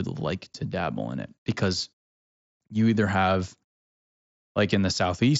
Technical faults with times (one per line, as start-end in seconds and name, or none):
0.72 concealed Bluetooth headset packet loss
1.79 concealed Bluetooth headset packet loss